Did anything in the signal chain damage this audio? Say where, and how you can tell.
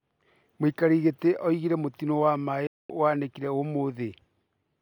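Yes, at broadcast reception: a digital broadcast dropout. Just after "augire mũtino wa maaĩ" the speech fades out within 3 ms and stays silent from 2.67 to 2.90 s, which fits about seven failed frames muted by the receiver. Unlike network concealment, nothing is patched in.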